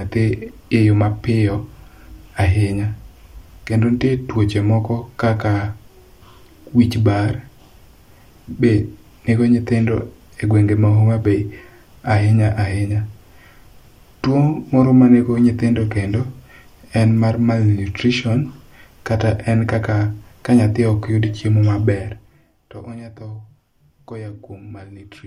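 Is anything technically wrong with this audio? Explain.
Yes, there's one problem, and it's late in this speech clip. From 21.80 to 22.56 s there's zipper noise. The level drops by something like 15 dB over that stretch, but it moves in coarse steps, around a hundred a second, with no smoothing between them. Each jump puts a tiny click into the waveform, so for that three-quarters of a second you hear a fast, buzzy ticking riding on the speech while the level falls.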